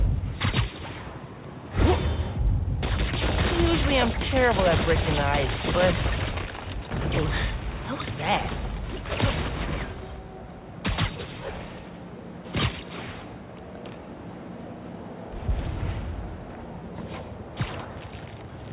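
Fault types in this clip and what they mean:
The audio carries no faults, only a narrowband call path that leaves nothing above 4 kHz, which fits a standard telephone-band codec such as G.711 A-law.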